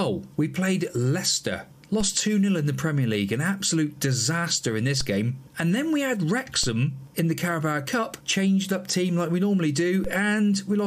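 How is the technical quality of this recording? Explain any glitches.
Four DC steps mar the recording, at 2.01, 5.01, 6.64 and 10.04 s. The waveform's zero line suddenly jumps by about -21 to -22 dBFS, then drains away through a 5 Hz high-pass, so each jump lands as a low thump.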